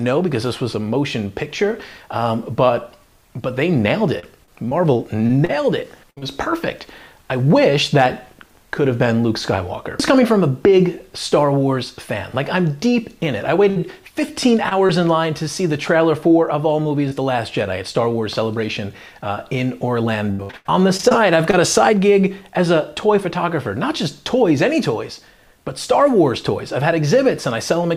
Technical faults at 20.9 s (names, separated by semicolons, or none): repeated packet loss (robotic sound)